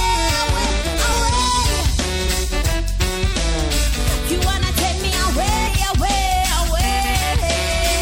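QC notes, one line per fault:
throughout: MP3 compression. The sound is watery and swirly, with a dulled top end, metallic chirps on bright sibilant-like detail, and attacks that smear rather than snap. This is likely MP3 coding with plainly audible damage, at a level that fits a bitrate around 64 kbps. At that rate the encoder cuts the treble above a fixed frequency and drops quieter frequency lines. Those lines flicker on and off from frame to frame, which produces the swirl.
1.11 s, 2.26 s, 5.66 s: compressed frames skipped. At each point the audio jumps forward, briefly smeared rather than cleanly clicked. The gap points to whole frames of about 26.1 ms going unplayed: roughly two frames, or about 50 ms, at 1.11 s and 2.26 s, and roughly three frames, about 70 ms, at 5.66 s. Adjacent frames overlap, so the decoder blends across each gap and leaves a soft blip instead of a hard edge.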